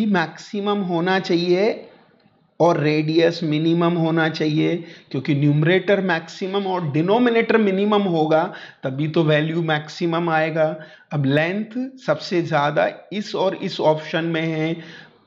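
Nothing here calls for a fix, since you can listen all the way through without hearing a single technical problem.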